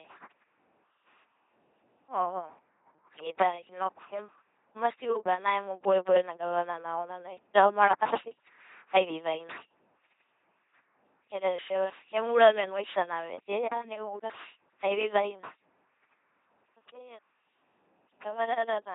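LPC-10 vocoder damage runs through the whole speech clip, and it is heavy. Instead of carrying the waveform, the coder models each short frame as a ten-pole vocal tract filter excited by either a pulse train or noise, never a blend. The result is a buzzing, mechanical robot voice, with stray buzz or hiss wherever the voiced/unvoiced call goes wrong. Nothing survives above 3.8 kHz, and the coarseness fits a 2.4 kbit/s stream.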